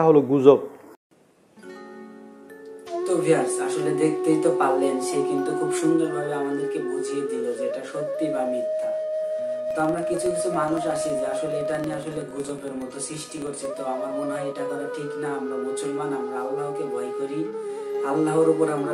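From 9.71 s to 13.73 s a filter restarted on every block, losing its memory at each boundary and ramping up from silence again. The result is a regular tick repeating at about 21.5 Hz, which fits a 2048-sample block, heard as a low buzz that grows and shrinks with the level of the sound. On a waveform, small evenly spaced spikes sit at the block edges; a spectrogram shows faint vertical striations at that spacing.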